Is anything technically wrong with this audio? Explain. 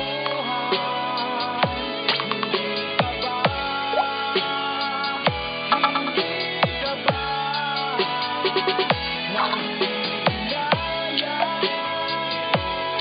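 No, nothing technically wrong stood out on listening to this audio.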